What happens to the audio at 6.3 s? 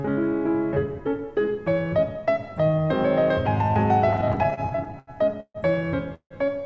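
A call audio freeze runs from 6.14 to 6.34 s, likely because packets stalled in transit and the jitter buffer ran dry. The receiver stretches the last sound into a fading buzz or hiss for about 160 ms, including roughly 90 ms that sink to silence. When the packets arrive, the audio resumes exactly where it paused, so nothing is lost, but everything after it now sits 160 ms later.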